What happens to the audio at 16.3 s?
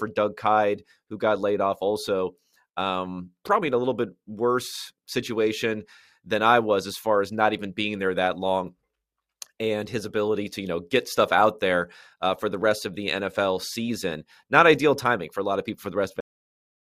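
At 16.3 s the speech has already stopped: a cut-off end takes hold at 16.20 s, just after "of people for the", and digital silence runs to the end at 16.99 s. The final stretch of audio was never written out, so the speech breaks off mid-sound with no natural decay. On a waveform the signal drops straight to silence; a spectrogram shows energy ending in a sharp vertical edge, then blank.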